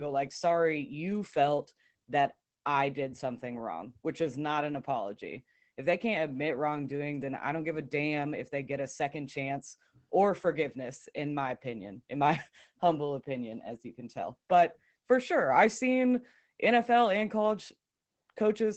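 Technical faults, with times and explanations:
Throughout: Opus voice compression. The speech is cut off above about 8 kHz and sounds muffled, hoarse and faintly robotic, which fits Opus in its SILK speech mode at a low rate near 12 kbps, where the excitation is coded coarsely.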